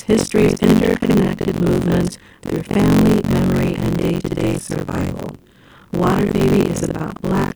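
Throughout, the ring buffer's writer and reader have slipped: buffer tearing splices in audio from around 70 ms earlier, buzzing robotically at 46.9 Hz.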